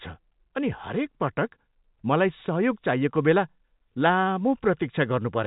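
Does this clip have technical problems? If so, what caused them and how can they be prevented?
No, nothing stood out on listening to this speech clip.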